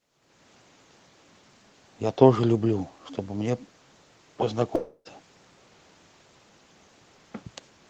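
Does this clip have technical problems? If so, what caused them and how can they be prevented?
Yes. Long network dropout, 4.75 to 5.08 s: audio likely stopped arriving, so the receiver stretched the last sound into a fading buzz for about 0.3 s, then left a brief silence before the speech resumed. Prevent it with a steadier connection, such as wired networking and less competing traffic.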